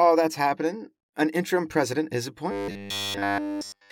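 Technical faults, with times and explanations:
2.51–3.92 s: robotic sound from repeated short buffers. From this point to the end of the clip, the speech collapses into a rigid, metallic buzz pitched at 100 Hz. It still tracks the rough shape of the speech. The likely cause is audio arriving too seldom, so the playback side loops a fragment of roughly 10 ms while the real audio is skipped. Essentially all of this stretch is repetition, and the fixed loop length imposes the 100 Hz tone.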